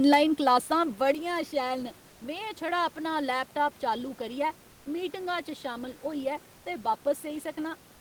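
Speech recorded over audible room noise, about 29 dB below the voice, with a microphone volume step-down and two stretches of comfort noise in place of the background. At 1.14 s the whole signal, voice and room sound together, drops by about 6 dB in one step and stays there. That points to the call software likely lowering the device input volume after judging it too loud. A gain change affects everything at once and persists, which separates it from a brief swap of the background alone.

The comfort noise appears from 2.09 to 2.21 s, a 120 ms gap just before "में छड़ा", and from 6.57 to 6.65 s, 80 ms just after "शामल होइयै". In both places the textured room sound gives way to a smooth, featureless hiss. The first patch is about 6 dB quieter than the real background. The second sits at the same level and betrays itself only by its flatness. This is the pattern of discontinuous transmission, likely Opus DTX, with the receiver synthesising filler during pauses. 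Unlike the gain step, the genuine background returns as soon as speech resumes.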